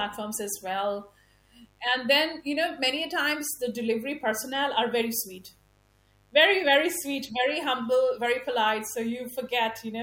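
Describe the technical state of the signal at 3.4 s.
At 3.4 s, as throughout, a mains buzz sits well below the speech: sharp 50 Hz switching spikes give a raspy, harmonic-rich rasp, not a smooth low hum.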